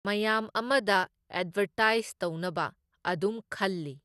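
From the start to the end, the speech has a dull, gurgling, granular quality. Nothing is present above 12.2 kHz. The top of the spectrum is missing, and the upper detail seems to flicker in and out. This is likely MP2 compression. The coder splits the sound into sub-bands and shares out a small bit budget. Starved upper bands are switched off, and the remaining bands are coarsely quantised. The damage is plainly audible, which fits a rate of around 80 kbps.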